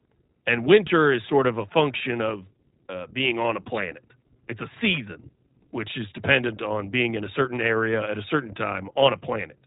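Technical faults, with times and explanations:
Throughout, iLBC codec: the speech passed through a narrowband VoIP codec that rebuilds each 20 ms frame's excitation independently, at a rate that fits 15.2 kbps. Nothing survives above 3.8 kHz, so the speech sounds muffled, plainly rough and synthetic.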